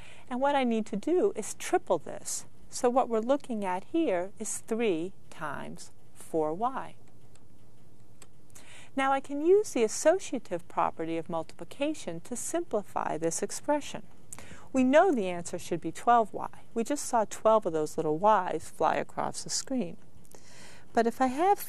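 Nothing is technically wrong with the clip; no faults can be heard at any point.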